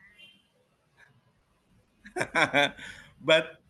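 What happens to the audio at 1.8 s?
At 1.8 s you're inside a stretch of repeated packet loss (robotic sound) running from about 1.03 to 1.89 s. Four short holes, the longest 40 ms, get patched by stretching the last bit of audio, so the sound turns choppy there.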